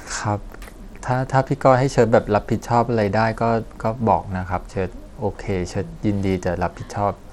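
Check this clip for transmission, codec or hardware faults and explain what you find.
One codec fault runs through the whole recording. Throughout, the speech has likely passed through Bluetooth SBC compression at a small bit pool, which fits a rate near 96 kbps. Its eight coarse sub-bands starve the upper bands of bits, so the treble flickers and drops away while a gritty, aliased noise rides on the speech.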